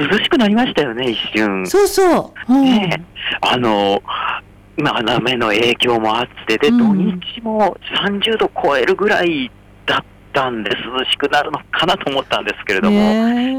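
Hard clipping runs through the whole of the audio, from start to finish. The signal arrives at a stage that cannot pass it, overdriven by about 8 dB, so every peak that exceeds the limit is sliced flat. Only a few percent of samples reach that ceiling, but each flattened top adds harmonics high in the spectrum. That is why loud moments carry a harsh, crackling fuzz rather than a clean rise in level.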